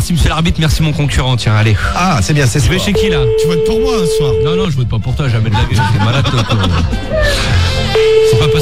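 Nothing in the audio shows a technical fault.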